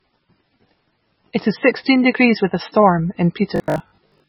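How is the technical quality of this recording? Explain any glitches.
The technical quality is poor, with two faults in the speech.

MP3 compression runs throughout, likely from a very low bitrate near 18 kbps: the encoder drops weak detail, leaving watery speech.

Robotic sound from repeated short buffers runs from 3.56 to 4.28 s, after "degrees with a storm". About half the audio is short repeated chunks, imposing a rigid 50 Hz metallic buzz that fits 20 ms buffers.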